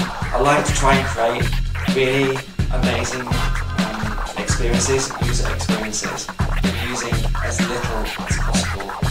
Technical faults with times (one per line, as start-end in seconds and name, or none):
none